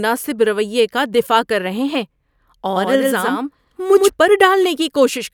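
A doubled audio track runs from 2.75 s to 4.09 s in this speech recording: a second, full-band copy trails the original by roughly a tenth of a second at about 5 dB lower, with no decay or room colour. It switches on and off abruptly, likely from a slower second capture path or two misaligned copies in an edit.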